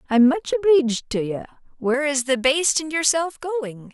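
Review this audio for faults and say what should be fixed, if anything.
From about 1.94 s to the end, the speech turns thin, bright and hissy. That's pre-emphasis left on: the treble was lifted for transmission and the matching de-emphasis never got applied, so the highs stay boosted by about 11 dB at 10 kHz relative to 1 kHz. The shape of the lift fits a J.17 curve. Sibilants jump out and the low end feels hollow next to the first half. To prevent it, make sure every pre-emphasised path has its matching J.17 de-emphasis switched in at the receiving end.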